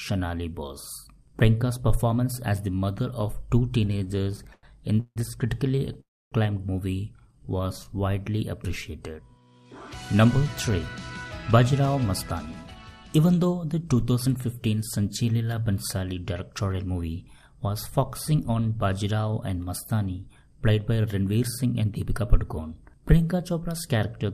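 From 3.85 to 5.18 s, repeated stalls (stutter) break the sound into 15 short holds, the longest 160 ms, filling 405 ms and about a third of the span. From 5.68 to 5.96 s, five brief catches of up to 15 ms follow. Packets kept arriving late, so the receiver stretched the last sound each time. Unlike a single freeze, these are many small hitches, and nothing is lost.

From 6.00 to 6.34 s, a call audio freeze holds the sound for 314 ms. A brief carried-over tone decays into about 270 ms of silence before the sound resumes where it stopped. This one long halt, likely from packets held up in transit, sets it apart from the stutter.

From 7.16 to 7.86 s, a jitter buffer slow-down plays the sound at 84% speed, adding 117 ms by repeating pitch periods. It drags without dropping in pitch and without any gap, which distinguishes it from a stall.

A jitter buffer speed-up runs at 112% from 9.65 to 12.83 s, cutting about 0.4 s. 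It runs at 116% from 16.81 to 17.03 s and at 111% from 21.45 to 22.23 s. Small pitch-period slices are trimmed, so the sound hurries while its pitch stays unchanged.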